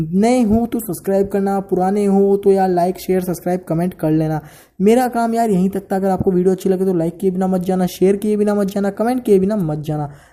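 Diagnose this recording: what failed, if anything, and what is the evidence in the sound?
Nothing in the recording stood out on listening as a failure at any stage of the chain.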